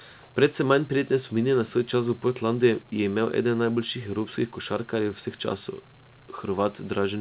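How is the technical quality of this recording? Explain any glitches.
No glitches are audible anywhere in this speech recording.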